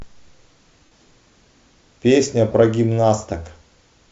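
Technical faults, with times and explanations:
0.85–0.92 s and 2.52–2.54 s, lost LE Audio frames: the decoder concealed 60 ms and 22.5 ms gaps by repeating the last spectrum with random signs, causing a noisy smear that shows as blurred, harmonic-less bands on a spectrogram.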